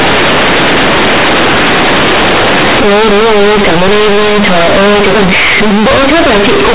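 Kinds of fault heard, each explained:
Companded audio read as linear: the A-law bytes are going straight out as plain 8-bit samples with nobody expanding them, so every sign flip jumps across half the range and quiet speech comes out as loud as shouting, with harsh buzzy distortion and heavy hiss in the gaps throughout.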